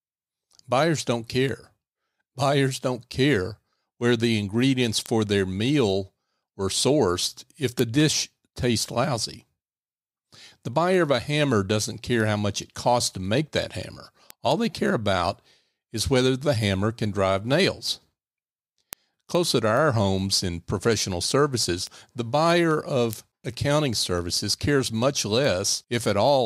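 From 0.23 s to 26.29 s, word clock ticks sound at roughly five per second. An unlocked receiving clock, about 100 ppm off, slips one sample each time.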